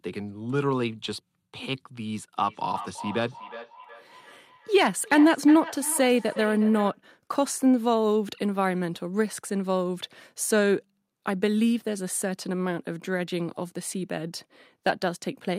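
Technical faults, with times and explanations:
2.42–7.01 s, feedback echo between two devices: the speech comes back at intervals of roughly 0.4 s, peaking about 14 dB below the direct sound. A second device in the room replays this microphone's signal, which gets picked up again. Each device's echo canceller ignores the other's playback.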